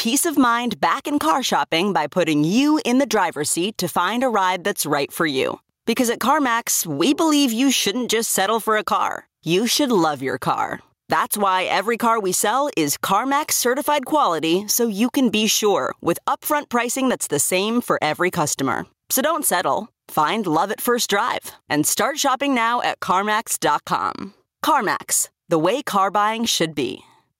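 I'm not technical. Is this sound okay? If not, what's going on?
No. All the way through, the level gets pulled down on every loud sound, so loud and soft parts end up closer together and the sound is squashed, and the level seems to breathe. This is gain pumping, likely from the microphone level set far too high with an automatic limiter constantly pulling it back down.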